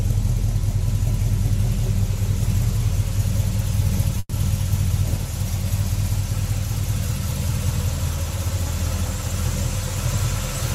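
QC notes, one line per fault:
4.19 to 4.34 s, call audio freeze: the sound stalls and the last bit carries on as a fading buzz for about 130 ms, then about 20 ms of silence, and it resumes where it left off with nothing lost, just 130 ms later, likely packets held up and an emptied jitter buffer.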